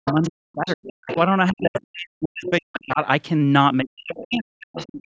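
Speech suppressed in double talk runs from 0.01 to 3.0 s. Across roughly two seconds of that span the talker's speech dips, thins or drops out in pieces, at worst by about 40 dB. The likely cause is an echo canceller that could not separate the near talker from the loudspeaker echo while both sides spoke, so it turned everything down. The other side's voice leaking through overlaps this. A second voice sits about 10 dB under the speech from 0.05 to 1.17 s and returns in brief scraps at 1.75 and 2.46 s. It is likely residual echo, left when the canceller removes only part of the loudspeaker signal picked up by the microphone. Suppression in double talk returns from 3.82 s to the end, pulling the speech down by up to about 40 dB for around a second in total. Within that stretch, fainter leakage of the far voice, about 20 dB below the speech, appears at 4.12 and 4.78 s, each lasting under a tenth of a second. 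The call's microphone processing band-limits the sound, with nothing above 8 kHz.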